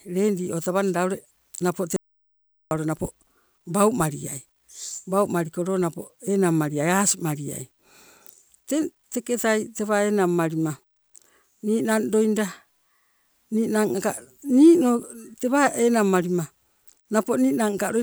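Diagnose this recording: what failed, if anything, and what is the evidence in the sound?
An audio dropout to silence runs from 1.96 to 2.71 s: 0.75 s of flat, silent waveform and blank spectrogram, likely an input link lost while recording continued.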